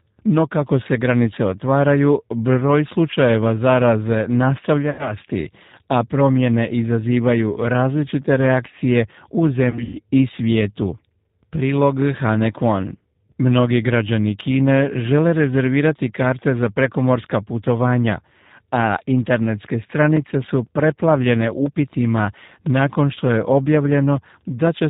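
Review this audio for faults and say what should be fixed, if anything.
G.729 codec, throughout: the 8 kbit/s G.729A coder rebuilds the speech from a filter, pitch predictor and sparse pulses, removing everything above 4 kHz and leaving a plainly rough, synthetic texture.

VoIP packet loss concealed by the speech codec, 4.90 to 5.14 s: about 90 ms of audio is missing, which fits three lost packets. The decoder stretches its last pitch and filter into a fading buzzy tone or coloured noise, and the speech stays weak briefly after it resumes.

VoIP packet loss concealed by the speech codec, 9.71 to 9.99 s, between "različite reakcije u" and "i svijetu": 150 ms is lost across 240 ms, with the longest run 120 ms. The extrapolated frames fade into coloured buzz before the speech recovers.

To prevent these, use a wideband codec at a higher bitrate and give the network path jitter buffering and redundancy or forward error correction so packets are not lost.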